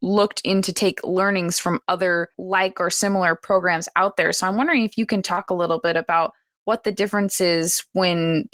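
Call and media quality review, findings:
Lost packet rebuilt from error correction, 3.47–3.57 s, between "other like or similar" and "out there": brief rough, grainy patch, no gap. Opus decoder playing low-bitrate in-band FEC copies carried by following packets, about 60 ms rebuilt, fitting roughly three lost packets.

Same fault, 5.37–5.43 s, after "wondering if you can": about 40 ms of coarser, noisier sound. Overlaps the concealed loss. Roughly two packets replaced from redundant FEC copies at reduced detail.

Short concealed packet loss, 5.33–5.39 s, after "wondering if you can": short smear with a wobble. Jitter buffer/decoder PLC: about 40 ms arrived too late, about 35 ms filled by extending the preceding sound, then crossfaded back.

Same fault, 5.45–5.49 s: quick smear. About 20 ms missing, about 25 ms synthesized by PLC continuation and blended into the real signal. Third hit in this burst; packet loss clustered around 5.3–5.5 s.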